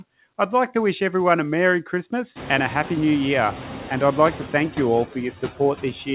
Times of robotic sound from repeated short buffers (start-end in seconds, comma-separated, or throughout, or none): none